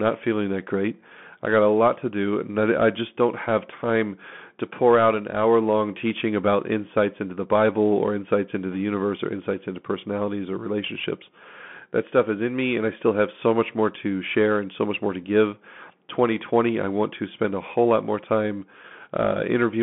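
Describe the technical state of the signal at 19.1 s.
At 19.1 s, as throughout the clip, the speech is passing through a Bluetooth CVSD headset codec, a one-bit delta modulator with an adaptive step, consistent with a 64 kbps link. The band is confined to 150 Hz to 3.4 kHz, nothing above 3.8 kHz, with scratchy s sounds and granular hiss.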